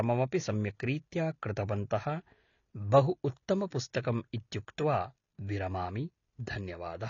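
Throughout, the speech sounds dull and smeared, with nothing above 7 kHz. An audible warbling or fizzy texture points to AAC compression, likely at a low bitrate near 24 kbps.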